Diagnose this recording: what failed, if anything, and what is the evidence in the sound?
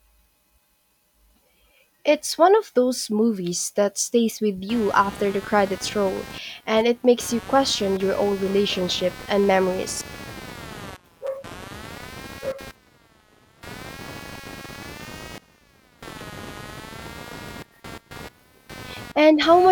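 Computer activity noise, analogue ground: from 4.69 s, after "movies that stays with", a buzz pulsing near 200 Hz, about 20 dB down, as computer load shifts the shared ground.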